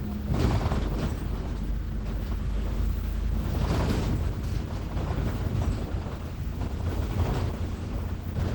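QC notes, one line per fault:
throughout: Opus compression. The audio sounds rough, grainy and hoarse, likely from Opus hybrid mode at a rate suggesting about 16 kbps, with starved bands filled by noise.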